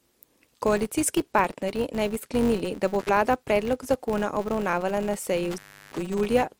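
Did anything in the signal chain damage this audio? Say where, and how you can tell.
Yes. In the processing stage, a filter is restarting on every block instead of carrying its state across. Each block therefore starts from silence with a small transient, and throughout this speech clip those transients line up into a buzz at about 188 Hz, which fits a 256-sample buffer at 48 kHz. The buzz rises and falls with the speech level, so it comes from the processing rather than from an external hum source.

The analogue wiring also has an intermittent contact, where a loose plug or cable opens for a moment. The first break runs from 3.00 to 3.09 s, just after "bi sklenili da bo" and before "vlada predlog zakona obravnavala", with the line open for about 72 ms. The second, longer one runs from 5.51 to 5.98 s, after "zakona obravnavala na seji", with the line open for about 339 ms. Both have crackle at their edges and faint hiss in between.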